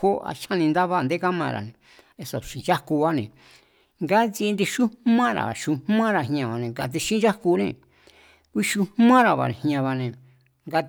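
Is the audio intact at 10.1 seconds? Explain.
Yes, the speech at 10.1 seconds is intact, with no dropout, click, distortion or other fault at that point.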